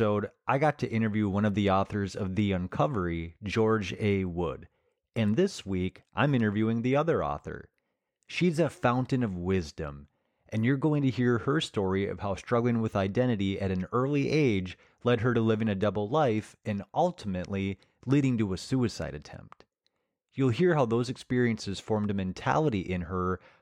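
No technical faults can be heard anywhere in the recording.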